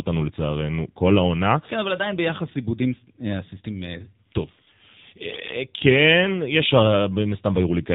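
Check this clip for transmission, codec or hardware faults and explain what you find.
One codec fault runs the full length of the speech. AMR narrowband mobile codec damage, throughout: the band stops at 4 kHz, and a coarse vocal-tract model driven by sparse pulses, consistent with a rate near 7.4 kbps, makes the voice plainly buzzy, muffled and synthetic.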